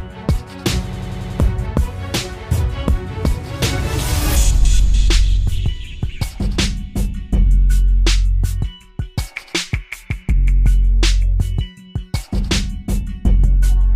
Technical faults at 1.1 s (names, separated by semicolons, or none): system hang loop